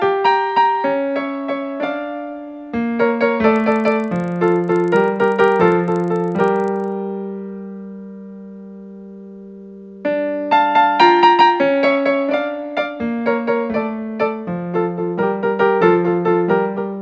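From 3.56 to 6.92 s there's a steady buzz riding on the audio, a tick every 40 ms, so about 25 per second. That's the resampler restarting on every block. Each chunk got converted in isolation, so the filter had no real neighbouring samples at the block edges and left a small error at each seam. The sound points to a drop from 48 kHz to 16 kHz, and the buzz only appears where there's signal.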